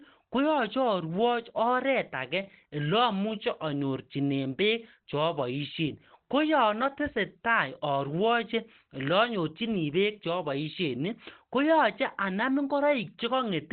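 Speech with Opus compression throughout: muffled, hoarse narrowband sound, likely from the SILK speech mode at a low rate near 16 kbps. A spectrogram shows nothing above 4 kHz.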